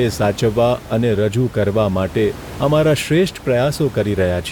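No technical faults are audible.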